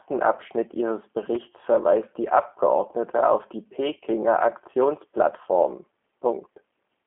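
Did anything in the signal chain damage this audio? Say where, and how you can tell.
Yes, at the codec stage, for the whole clip. The speech has nothing above about 3.7 kHz and a slightly rough, synthetic buzz, which points to a G.729 codec at 8 kbit/s. A plain telephone-band filter would only narrow the sound, with no buzz, whereas G.729 rebuilds each 10 ms frame from a few excitation pulses.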